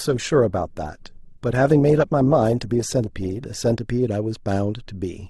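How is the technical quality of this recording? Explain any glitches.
The speech sounds dull and smeared at the opening, then clears abruptly. From 0 to 3.8 s the treble is missing or synthetic and codec artefacts are stronger, the sound of an adaptive stream starting at a low bitrate, which fits roughly 16 kbit/s Opus. The player began on that cheap version to start quickly, then switched to a better one, plausibly around 64 kbit/s, once it had gauged the connection. The improvement at 3.8 s is sudden, with no gap.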